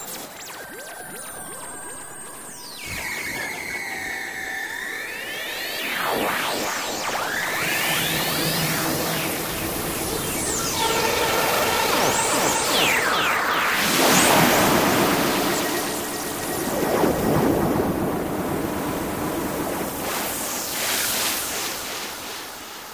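Sounds, with no technical faults to report.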